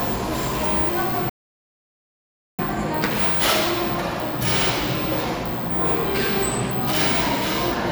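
At 1.29 s the sound drops abruptly to silence and stays silent until 2.59 s, when it picks up again at exactly the point where it broke off, with nothing skipped. That is a rebuffering stall: playback consumed all the audio it had downloaded and halted until more data arrived. No material goes missing, but the gap inserts about 1.3 s of dead air into the timeline, stretching the sequence by that amount.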